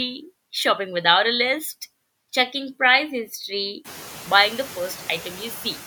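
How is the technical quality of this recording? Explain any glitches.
The recording carries noise suppressor artifacts throughout. Room noise also swells by about 18 dB around the 4-second mark, though it stays about 20 dB below the speech.

Noise suppressor artifacts, whole clip: the suppressor lowers bands it judges steady noise by about 11 dB frame by frame. The background therefore dips between phrases and rises under speech. Unlike a gate, it never drops to full silence.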